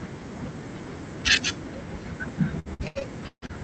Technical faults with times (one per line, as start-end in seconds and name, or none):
2.59-3.51 repeated stalls (stutter)